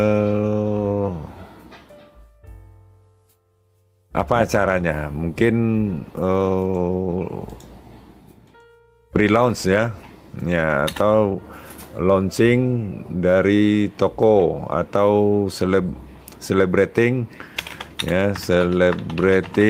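From 5.74 to 8.01 s, a call bitrate drop makes the sound coarser and duller, consistent with Opus falling from about 32 to 18 kbps; unlike packet loss, nothing drops out or clicks.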